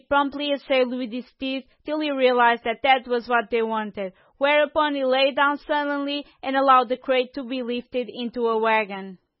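This speech clip carries MP3 compression damage from start to finish. Nothing is present above about 5.6 kHz, a hard treble ceiling of the kind an encoder imposes when it runs short of bits. The remaining band sounds watery and swirly, with s sounds turning to metallic chirps and consonant attacks smeared. The damage is heavy and points to a very low bitrate, around 16 kbps, where weak frequency lines drop in and out between frames, the likely cause.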